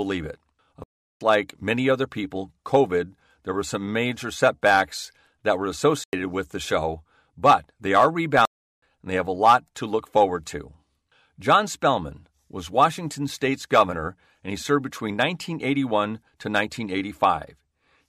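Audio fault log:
0.84 to 1.21 s, block of digital silence: the speech drops out to silence for about 0.37 s right before "like many other people", cutting out and back in with no fade, most likely the output buffer not getting filled in time.
6.04 to 6.13 s, block of digital silence: a shorter 93 ms hole between "major setbacks that were" and "with the show but", heard as a short hole.
8.45 to 8.82 s, block of digital silence: another 0.37 s gap between "show but they are" and "and they have a". The two long gaps match in length, which fits a 16384-sample block, and the short one fits 4096.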